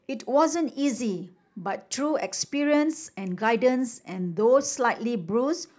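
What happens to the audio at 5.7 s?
Nothing goes wrong at 5.7 s; the speech there plays through cleanly, without dropouts, clicks or distortion.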